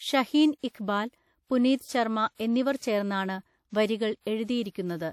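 Throughout the speech, the sound rings and smears, with a hiss that swells alongside each phrase, likely from WMA compression at a rate that fits around 48 kbps. A spectrogram shows a hard ceiling at 17.3 kHz and patchy gaps where weak components were dropped.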